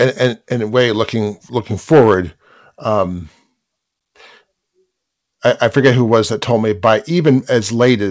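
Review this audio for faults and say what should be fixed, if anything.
No faults found; nothing here needs fixing.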